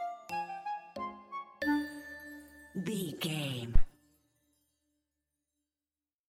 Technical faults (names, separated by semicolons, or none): phantom power thump